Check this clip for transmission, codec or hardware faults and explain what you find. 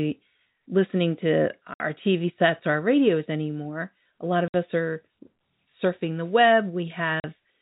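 The clip has one transmission fault, repeated three times, over G.711 telephone coding that caps the speech at 4 kHz.

Packet loss filled with silence, at 1.74–1.80 s, 4.48–4.54 s and 7.20–7.24 s: packets went missing and the receiver played silence instead. The 60 ms and 40 ms holes suggest 20 ms packets, and the speech cuts off abruptly at each hole's hard edges.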